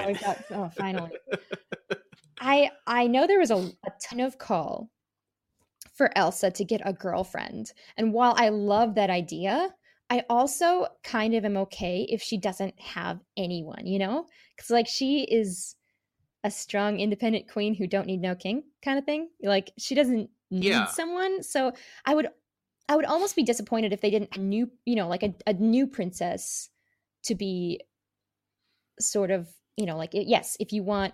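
At 4.11 s after "there was a a", 20.61 s after "she doesn't" and 24.35 s after "disappointed if they didn't", compressed frames are skipped. Several 20 ms frames go missing, so the sound jumps ahead by about 0.1 to 0.2 s. On a spectrogram each one shows as an abrupt shift in pattern.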